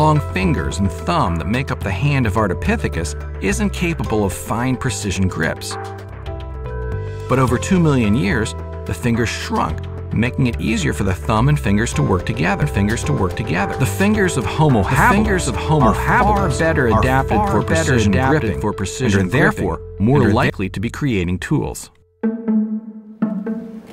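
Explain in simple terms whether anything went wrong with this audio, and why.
Something did go wrong. From 12.62 s to 20.50 s the clip has a doubled audio track: the same sound plays twice at once, with the second copy trailing about a second behind and at roughly the same loudness. The copy is dry and sharp rather than echo-like, and it starts and stops abruptly at those times. The likely cause is the audio being captured a second time through a slower route, or an edit that left two out-of-step copies layered together.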